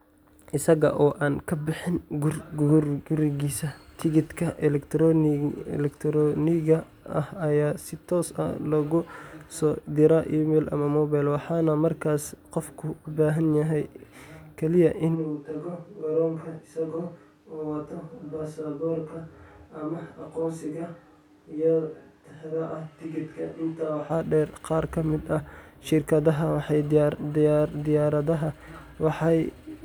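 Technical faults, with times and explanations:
15.17–24.09 s, switch to a distant microphone: the close microphone's feed likely drops out, and the recording falls back on a pickup much further from the talker. The speech turns abruptly roomy and hollow, thinner in the bass and about 5 dB quieter, with room noise about 35 dB below the speech. The far microphone hears wall reflections and ambience almost as strongly as the direct sound. The close sound returns just as suddenly at 24.09 s.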